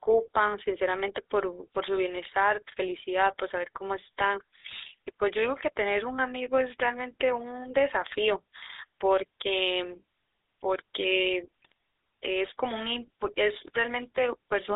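Throughout, the GSM full-rate codec gives the speech a buzzy, gravelly roughness; a spectrogram shows energy confined to roughly 250 Hz to 3.7 kHz, consistent with a 13 kbps GSM full-rate coder. From 2.24 to 2.33 s, GSM bit errors corrupt the decoder's parameters, producing a squawking burst that shows as smeared spectral frames or a ragged level spike. Another burst of GSM bit errors from 11.62 to 11.72 s causes gargling pops, visible as a distorted spectrum or a brief level jump.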